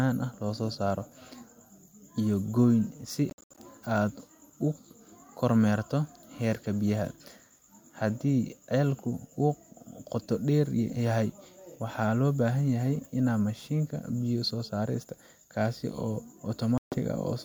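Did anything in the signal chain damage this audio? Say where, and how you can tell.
Yes. Speech drops out in scattered gaps at 3.30–3.59 s and cuts to silence at 16.78–16.98 s, then resumes skipped ahead. This is likely a Bluetooth dropout, with packets lost on the wireless playback link.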